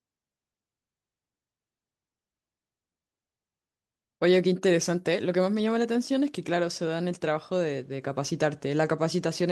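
A speech recording in which no technical fault can be heard anywhere in the signal.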